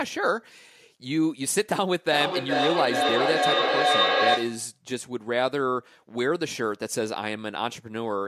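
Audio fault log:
2.08–4.77 s, feedback echo between two devices: the speech keeps coming back roughly every 0.4 s, thinner and more ringing each pass, peaking about 3 dB above the direct speech. A second device in the room is replaying this signal into a microphone whose echo canceller can't remove it.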